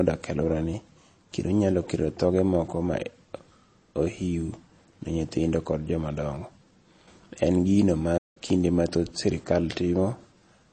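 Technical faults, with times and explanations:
Throughout: MP3 compression. The speech appears to have passed through a low-bitrate MP3 encode, and a rate as starved as roughly 32 kbps fits what is heard. Short of bits, the encoder likely cut the treble at a fixed frequency and zeroed weaker frequency lines, which flicker in and out between frames. The result is plainly audible: dull, band-limited speech with a watery, swirling texture, metallic chirping on s sounds, and softened consonant attacks.
8.17 to 8.37 s: playback stall. The player likely ran dry of data or had its output thread blocked, so it stopped delivering samples until it recovered. The speech cuts off abruptly mid-flow and drops into silence for about 180 ms before sound returns.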